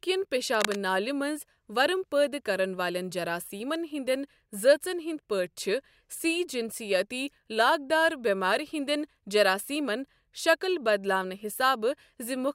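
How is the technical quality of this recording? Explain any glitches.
One glitch stands out near the start of the speech. From 0.53 to 0.76 s, just before "نالہِ منٛز ورم", there is cable scratch noise: a dense, uneven scratching burst only slightly quieter than the speech, likely from a worn cable or connector shifting so its contact resistance fluctuates rapidly.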